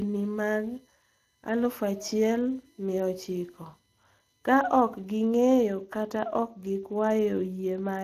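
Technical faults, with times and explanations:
Throughout, Speex codec: the speech sounds plainly noisy and hoarse, with nothing above 15.2 kHz, pointing to a CELP coder at around 22 kbps starving the excitation.
0.00 to 5.23 s, USB whine: a faint fixed-pitch whine about 40 dB below the speech, built on 1 kHz and strongest at 6 kHz, from 1 ms USB frame current leaking through power or ground.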